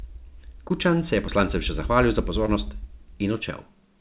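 Twice in this speech recording a short stretch of audio failed to reach the decoder in time, at 0.68 to 0.72 s and again at 2.46 to 2.49 s. Each gap is about 20 ms, which fits a single lost packet. This is short concealed packet loss: the receiver filled each hole by extending the preceding sound and then blended back into the real signal. Each repair is heard as a brief smear or wobble over a call-band sound with nothing above 4 kHz.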